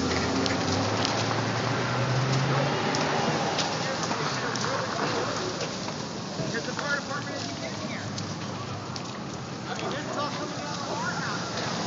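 No technical faults can be heard anywhere in the clip. Nothing in the audio shows a break, a disturbance or a change in level that would point to a problem in the chain.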